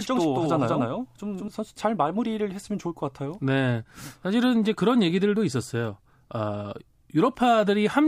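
A second, late copy of the same signal is most likely being mixed back in, either captured again through a slower path or left out of step by an edit, producing a doubled audio track from the very start until 1.48 s. The copy trails by roughly a fifth of a second at about equal loudness, so every syllable of speech is followed by a dry, full-band repeat with no room tail, and the doubling stops abruptly.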